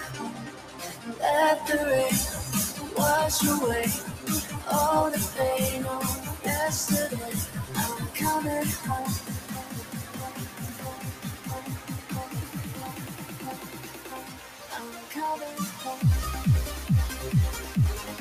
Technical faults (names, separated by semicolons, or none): noise suppressor applied to music or sounds; sound cut by the noise suppressor